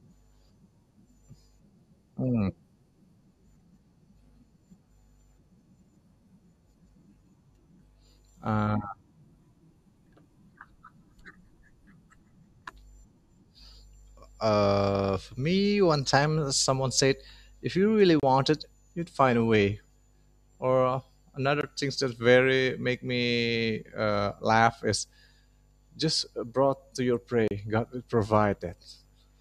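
Speech, interrupted three times by a block of digital silence: at 18.20 to 18.23 s, at 21.61 to 21.63 s and at 27.48 to 27.51 s. Each dropout lasts about 21 to 32 ms, so it is heard as a short hole rather than a tick. The signal drops straight to silence and returns with no fade. The 21 ms gap fits an unfilled 1024-sample output buffer at 48 kHz.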